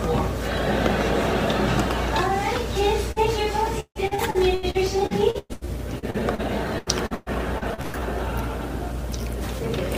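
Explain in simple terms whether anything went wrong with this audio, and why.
A few things went wrong. First, a burst of packet loss at 3.11 to 3.19 s: some data was lost or arrived too late, so the player stretched the last bit of sound for about 46 ms, let it fade, then jumped ahead, skipping about 40 ms.

Then repeated packet loss, the robotic sound, takes over from 3.8 to 6.41 s and again from 6.78 to 8.0 s. The holes come back to back: about fourteen in the first stretch, with the longest at 153 ms, and seven in the second, with the longest at 119 ms. Each one gets patched by repeating the last sound, so roughly a third of each stretch is filler. That makes it choppy, with pieces missing.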